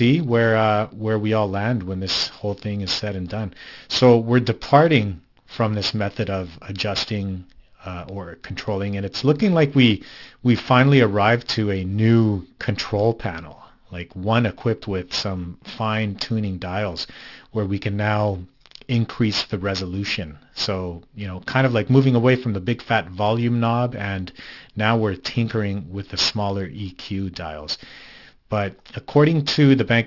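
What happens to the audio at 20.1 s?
At 20.1 s, as throughout, sibilants sound gritty and metallic: aliasing, where content above 6 kHz folds back to false pitches, consistent with downsampling to 12 kHz without filtering.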